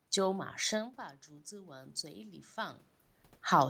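From 0.72 to 2.86 s there is automatic gain rising. The input falls by about 15 dB as the talker moves off-mic near 1 s, so the gain control slowly adds about 6 dB, and the voice and room noise swell together.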